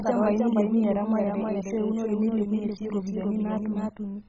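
A doubled audio track runs through the whole clip: a second full-band copy of the speech trails the original by roughly a third of a second at about 5 dB quieter, with no decay or room colour. The likely cause is a second, slower capture path mixed back in.

MP2 compression is also heard throughout. Nothing reaches above 7.5 kHz, so the speech sounds dull, and the remaining sub-bands flicker and carry a gurgling, granular roughness. The heavy damage likely comes from MPEG Layer II coding at a very low rate, consistent with about 16 kbps.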